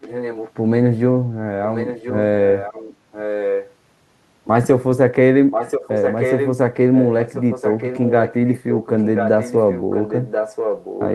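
Speech with an echo leak. A delayed copy of the voice returns just over a second late at 0.0–0.52, 1.71–2.19, 2.45–2.96, 3.12–3.69, 5.51–6.52 and 6.93–11.05 s. It starts faint and grows louder. Likely cause: a speakerphone whose echo canceller let sound through.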